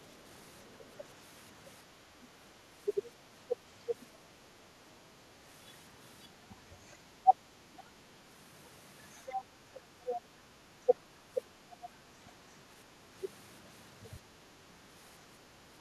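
Across nearly the whole clip, from 0.0 to 15.53 s, the talker's speech is pulled down in patches that add up to about seven seconds, with the deepest dips reaching around 20 dB. This is speech suppressed in double talk, likely caused by the echo canceller turning down the near voice while trying to remove loudspeaker echo. On a waveform the envelope sags in uneven stretches, and a spectrogram shows the upper harmonics thinning or gapping during those dips.

The other side's voice leaking through appears four times, likely residual loudspeaker echo that the canceller failed to remove. The first is a faint scrap at 0.55 to 0.76 s, about 35 dB below the speech. From 3.03 to 4.05 s it is clearer, at about 20 dB down. From 7.73 to 10.21 s it is strongest, only about 5 dB under the talker. The last is a brief burst at 11.72 to 11.88 s, about 15 dB down. A spectrogram shows a second, overlapping harmonic pattern.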